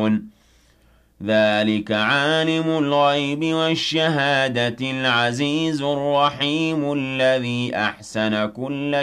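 Nothing technically wrong turns up anywhere in this audio, so there's nothing to flag here.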